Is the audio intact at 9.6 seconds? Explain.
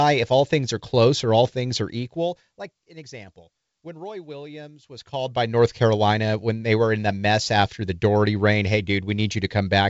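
Yes, the audio is intact at 9.6 seconds, with no dropout, click or other fault at that moment.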